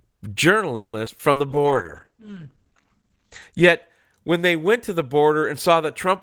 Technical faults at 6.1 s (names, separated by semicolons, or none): none